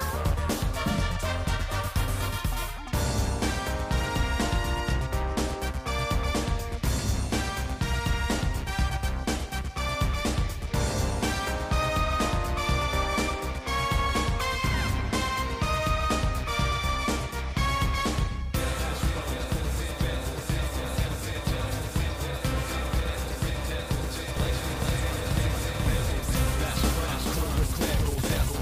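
From 24.37 s to the end, every sound is followed by an identical copy roughly 0.4 s later at about the same level, with no decay or room colour, and it starts abruptly: a doubled audio track, likely from a second, slower capture path mixed in.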